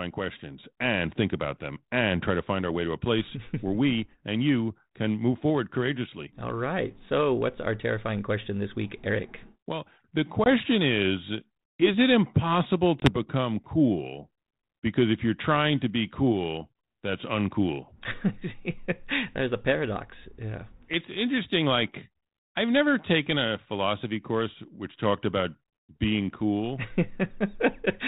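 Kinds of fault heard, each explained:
Packet loss on an ADPCM call: twice, about one 20 ms packet drops out as hard-edged silence. Speech then resumes distorted while the decoder's predictor and step size resynchronise.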